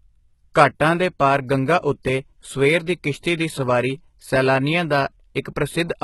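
Speech, carrying heavy codec damage throughout: the treble sounds synthetic, with s sounds turning gritty or lispy and upper harmonics that do not sit naturally on the lower ones, and nothing is present above 11.8 kHz. The likely cause is HE-AAC compression at a low bitrate, consistent with about 16 kbps. The codec keeps only the lower band and rebuilds the top by copying lower content upward under a coarse envelope, so the regenerated treble never matches the original. From 0.12 s to 6.03 s there is a steady stream of tiny ticks, roughly every 20 ms, some 300 in all, fast enough to merge into a regular rattle under the speech. These are clock slip clicks, likely from two devices running on unsynchronised clocks about 1000 ppm apart. Each time the drift adds up to one whole sample, a single sample is dropped or repeated, producing one tick.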